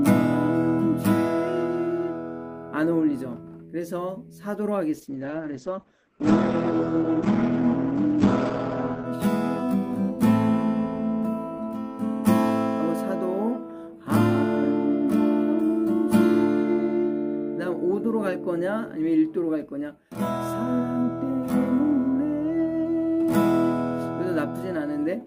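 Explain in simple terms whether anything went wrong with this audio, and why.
Something did go wrong. There is a call bitrate drop from 4.94 s to 9.11 s. The connection's estimate of how much data it could carry fell sharply, so the encoder had to squeeze the sound into far fewer bits and trim off its upper range, keeping nothing above about 8 kHz. For roughly four seconds the sound turns coarse and muffled, losing its crispness, until the data rate recovers and the clarity returns.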